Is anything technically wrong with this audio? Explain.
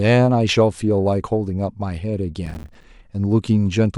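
Yes. From 2.46 to 2.84 s a processor overload crackle occurs: the processor falls behind and misses buffer deadlines in a row, about twenty, each roughly 5 ms long. Every miss drops in a short hard-edged silence, so the speech turns to gritty crackle, then clears.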